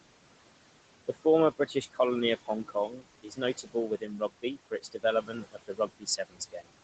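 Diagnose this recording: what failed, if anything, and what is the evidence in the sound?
Noise suppressor artifacts, at the call-processing stage, run through the whole clip. The room noise, sitting about 14 dB under the speech, is pulled down by about 21 dB in the pauses and comes back under the talking. The suppressor gates it band by band.

Speech cut by the noise suppressor occurs at 1.58–1.99 s, 2.43–3.06 s, 3.22–5.04 s and 5.22–6.7 s. Quieter parts of the speech drop by about 18 to 21 dB and sound swallowed, briefly in the first two spans and for around a second in each of the last two. The suppressor mistook low-level speech energy for noise and attenuated it with the background.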